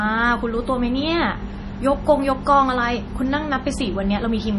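MP3 compression runs through the whole clip, and the speech shows it throughout. The sound has nothing above about 11.4 kHz, a hard treble ceiling of the kind an encoder imposes when bits run short, and the damage is heavy, which fits a low bitrate around 32 kbps. With so few bits, weak frequency lines drop in and out between frames, giving a watery, swirling texture, metallic chirps on s sounds and softened attacks. MP3 encoding is the likely cause.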